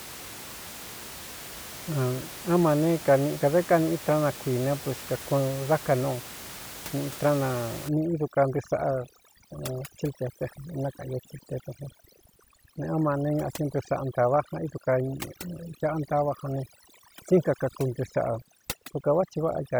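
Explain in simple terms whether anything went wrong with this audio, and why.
Overdone noise removal sets in from 7.89 s to the end. A noise-cleaning tool was set too strong, so it shuts off quiet bits of sound along with the background noise. The background drops and breaks up into twinkling, warbling specks.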